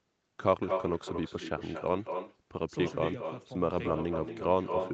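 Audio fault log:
Throughout: echo with no canceller, speech returns about 7 dB quieter roughly a fifth of a second later, thinner, as the far loudspeaker feeds back uncancelled.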